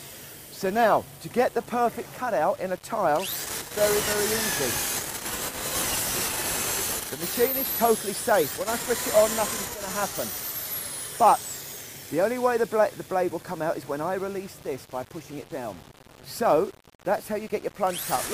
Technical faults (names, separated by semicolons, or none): low bit depth without dither